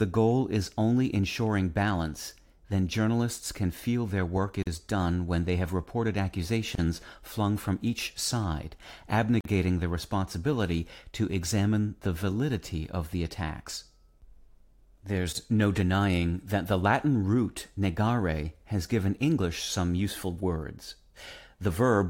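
Gaps at a join of encoded pieces occur at 4.63 s (about 42 ms), 6.75 s (30 ms), 9.41 s (46 ms) and 15.33 s (25 ms). The speech was encoded in separate pieces and joined without trimming, so each encoder's start-up delay and final-frame padding remain as short silences. Each one opens in continuous speech, its edges smeared by the codec, and the speech then resumes exactly where it stopped.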